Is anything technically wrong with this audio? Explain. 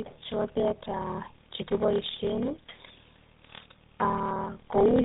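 Yes. Two faults run through the whole speech clip.

Block size mismatch (padded), throughout: one stage writes blocks shorter than the next stage reads, and the shortfall in each block is filled with zeros. The 38.3 Hz buzz marks the block rate. The slowdown to 0.889 times normal speed fits 1024-sample blocks being read as roughly 1150-sample blocks, so each block carries a brief silent gap. The result is a steady low buzz under slightly dragged speech at about its normal pitch.

Tandem speech coding, throughout: the speech was coded, decoded and coded again by a low-rate speech codec. The character points to GSM full rate applied twice, with a G.711 mu-law hop between the two passes. The second coder works on the first one's already degraded output, so the errors compound. Nothing is present above 3.8 kHz, and the voice comes across muffled, rough and warbly, worse than a single pass through either link would leave it.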